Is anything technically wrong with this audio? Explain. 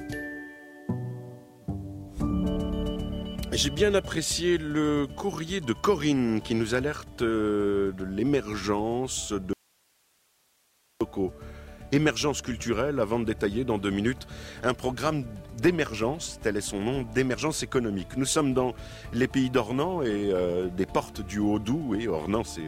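Yes. An audio dropout to a faint residue spans 9.53 to 11.01 s. The sound cuts abruptly, not fading, to hiss about 40 dB down, likely from a lost feed.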